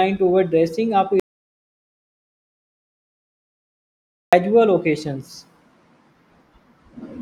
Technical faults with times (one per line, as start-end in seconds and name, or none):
1.20-4.33 audio dropout to silence